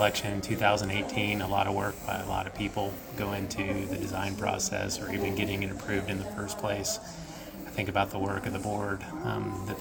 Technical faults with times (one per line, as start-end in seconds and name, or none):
0.93-3.91 mains buzz